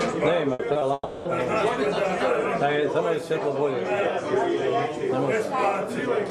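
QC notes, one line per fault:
0.53–0.61 s, burst of packet loss: the last sound gets stretched for roughly 60 ms and dips in level as it goes, then playback picks up further along. About 60 ms of material just isn't there, so the join feels like a small skip.
0.73–0.77 s and 0.79–0.83 s, short concealed packet loss: two quick hiccups, each about 20 ms, where the receiver carried the previous sound forward and blended back in. You hear a brief smear or wobble each time, and a sliver of audio drops out.
0.93–1.27 s, long network dropout: the sound hangs on as a fading continuation for about 320 ms, the last roughly 30 ms of it silent, before the audio returns further on. The whole stretch is lost, most likely because the network stopped delivering anything for that long.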